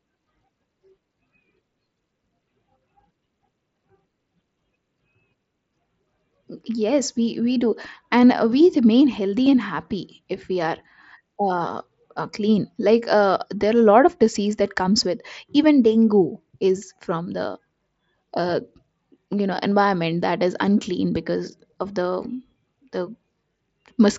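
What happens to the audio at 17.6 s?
Nothing goes wrong at 17.6 s; the speech carries on intact there through the Bluetooth mSBC headset link.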